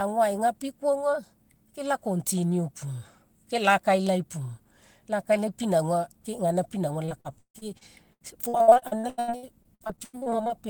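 A speech recording with repeated packet loss (robotic sound) from 7.05 s to 10.67 s. Dozens of short dropouts, the longest 158 ms, are patched by extending the preceding sound, so about a third of that stretch is filler, giving a choppy, robotic quality with pieces missing.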